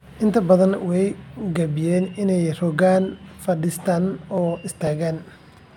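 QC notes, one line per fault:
4.38 to 5.36 s, periodic USB or driver dropouts: three or so ticks spaced 0.49 s apart in the speech, where something blocks the USB bus or audio driver and around 10 ms of audio is just skipped, so the waveform jumps and clicks.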